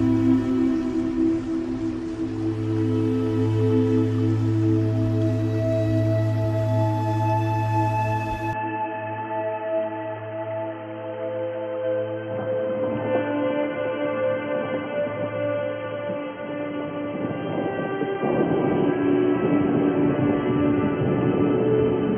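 From 8.53 s to the end, the audio abruptly loses everything above 3.2 kHz and turns dull, with no gap at the change, an unchanged level and a faint new noise floor. This pattern likely comes from the input switching to a poorer device.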